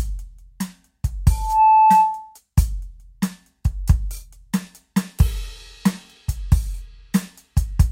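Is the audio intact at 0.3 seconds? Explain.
Yes, the music at 0.3 seconds plays through intact, with no dropout, click, distortion or other fault at that moment.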